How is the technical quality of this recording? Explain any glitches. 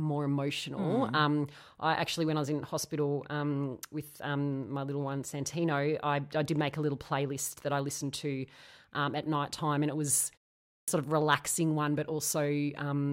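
The recording has one clear glitch, a clipped start after a pause at 10.69 s. Following a short silence of about 0.4 s, the speech resumes abruptly, with its opening sound missing until 10.88 s, so roughly 188 ms is lost. The playback device appears to have dropped into a low-power or unlocked state during the silence and needed that time to come back up, swallowing the onset.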